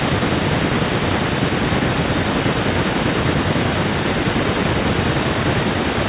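From start to finish, each phrase is shadowed roughly a third of a second later by a quieter, thinner copy, about 16 dB down: echo with no canceller, the far-end loudspeaker feeding back into its microphone.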